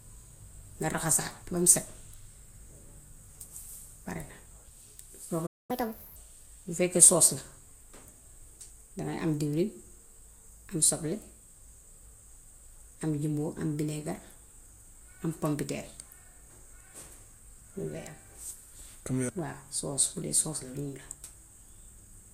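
A playback stall begins at 5.46 s, where the speech cuts out abruptly in mid-flow and the output falls silent until 5.71 s, a gap of about 0.23 s. The player most likely ran short of buffered data or had its playback thread held up, so nothing reached the output for that stretch. When sound returns, it picks up from the point where it stopped rather than skipping ahead.

Catch-up at higher speed follows immediately, from 5.71 s to 6.16 s. Having fallen behind, the player resamples its backlog to run at 1.5 times normal speed, so the delayed material is pushed out faster to close the gap. Because this is plain resampling and not time-stretching, pitch rises along with tempo, by roughly seven semitones, giving the speech a hurried, chipmunk-like lift. At 6.16 s both speed and pitch drop back to normal.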